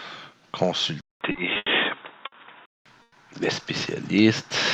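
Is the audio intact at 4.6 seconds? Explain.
Yes, at 4.6 s the audio is intact, with no dropout, click, distortion or other fault at that moment.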